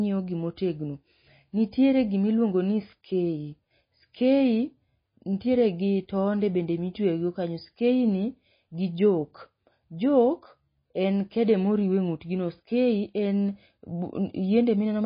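Speech, carrying plainly audible MP3 compression for its whole length: sibilants sound watery and swirly, and nothing survives above 5 kHz. A spectrogram shows a hard flat ceiling there, with patchy holes flickering below it. That likely points to a low bitrate, around 24 kbps.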